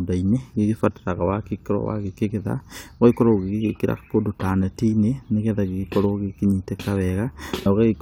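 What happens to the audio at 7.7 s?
At 7.65 s the speech is broken by a brief blip from damaged data in the compressed stream. Part of the data there is corrupt. The decoder misreads that frame, loses sync and hunts for the next valid frame header.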